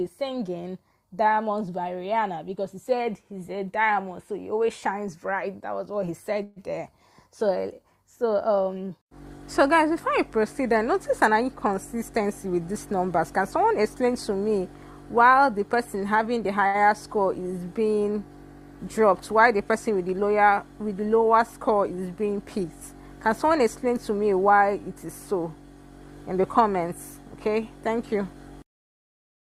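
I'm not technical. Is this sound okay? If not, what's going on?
No. At 6.43 to 6.59 s there is a call audio freeze: the sound stops moving forward for about 128 ms and the last bit is held over the gap, then it carries on exactly where it left off. Nothing is lost, but everything after arrives that much later. The likely cause is delayed network packets letting the receiver's buffer run empty.

From 11.28 to 14.10 s, 22.20 to 22.65 s and 23.28 to 23.93 s there is jitter buffer speed-up. The receiver trimmed many tiny slices to work off its backlog, so the audio runs about 5%, 7% and 6% fast at unchanged pitch. It sheds roughly 150 ms in the first stretch and about 40 ms in each later one, which can sound slightly hurried.

At 16.67 to 16.77 s there is a short stall from a late packet. One piece of audio was not there in time, so the sound just before it is stretched for 71 ms until it arrived. 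Nothing is skipped, but that moment is held slightly too long.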